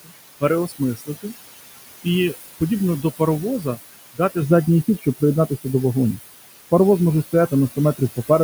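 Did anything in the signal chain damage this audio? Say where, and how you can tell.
Yes. The damage happens in call processing, where a noise suppressor sits in the chain. Noise suppressor artifacts run through the whole clip. The room noise sits about 12 dB below the speech. In the gaps it is pulled down by about 19 dB, then comes back up under the speech. The suppressor decides frame by frame which bands hold steady noise. It then turns those bands down, so the floor pumps with the speech.

The same stage also removes parts of the speech itself. Speech cut by the noise suppressor is heard from 0.96 to 1.25 s, with a drop of about 16 dB at its deepest. It happens again from 4.98 to 5.22 s, this time down by about 19 dB. Each time, roughly a tenth of a second of sound goes faint and swallowed. Quiet speech energy looked like noise to the suppressor. It was attenuated along with the background.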